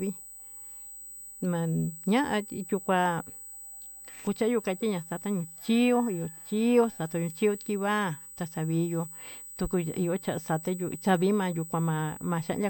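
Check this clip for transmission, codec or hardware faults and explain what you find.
A hardware fault is present. USB whine runs throughout the speech: current drawn in 125-microsecond microframes leaks into the power or ground, adding a steady, fixed-pitch 8 kHz whine about 20 dB below the speech.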